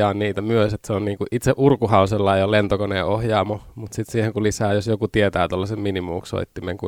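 Speech recording, no technical faults detected anywhere in the clip.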